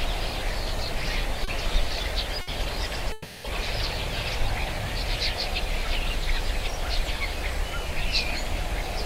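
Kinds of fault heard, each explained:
Short concealed packet loss: at 1.44 to 1.48 s, about 30 ms of audio failed to arrive in time. The receiver patched the hole by extending the preceding sound and blending back in, leaving a brief smear or wobble where the original detail is gone.
Burst of packet loss: from 2.41 to 2.48 s, a run of about 60 ms went missing together. The decoder stretched the last sound across the gap and faded it, giving a short held buzz or dimming hiss before the audio resumes further along.
Long network dropout: from 3.12 to 3.45 s, roughly a third of a second of audio is replaced by a sustained, fading continuation of the preceding sound, with no drop to silence, before the audio picks up further on. This is likely a network dropout.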